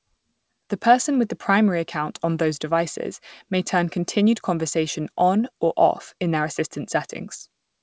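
No faults detected in the speech; the audio went over a wideband call path whose codec band-limits it, with nothing above 8 kHz.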